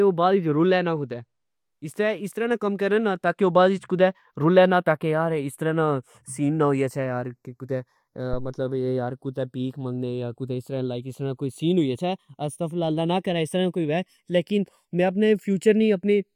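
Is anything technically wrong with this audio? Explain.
Yes, there are two faults in this speech recording.

Channels drifting apart runs through the whole clip. The two channels appear to be clocked separately, mismatched by something like 30 parts per million, so the gap between them creeps up to under half a millisecond. In mono, comb notches sweep slowly, giving a slow flanging. A fixed inter-channel offset would instead give static coloration.

A phantom power thump occurs from 8.33 to 8.57 s. A supply being switched on or off on the live input sends a voltage step through the coupling capacitors, producing a deep thud that dies away within about 53 ms. Unlike a plosive pop, it is a sudden electrical jolt.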